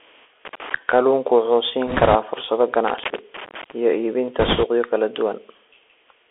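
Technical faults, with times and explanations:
Throughout: Bluetooth CVSD headset codec. The speech sits in a narrow telephone band of roughly 300 Hz to 3.4 kHz, so it sounds thin and boxed in. The delta coder sends a single up-or-down bit per sample at 64 kbps and adapts its step size, so a granular hiss rides under the voice, sibilants come out scratchy, and loud bright sounds that change faster than the step can follow turn gritty and distorted.
0.45–0.74 s and 2.88–3.72 s: loose connector crackle. Two irregular bursts of scratchy crackle break into the speech, the second one lasting almost a second. This is a worn or dirty contact that makes and loses connection rapidly as it moves, chopping the signal on and off many times in quick succession. Any DC offset on the line turns each make or break into a small pop, giving the rough, uneven texture.
1.87–2.16 s and 4.39–4.64 s: bit errors on a Bluetooth voice link. 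For about a quarter of a second each time, a rushing, crackly noise spreads over the speech. This points to something like one bit in twenty being flipped on the headset link. In a delta coder every bit carries the same small weight and its error fades as the decoder tracks on, so damage appears as dense grainy noise rather than loud clicks.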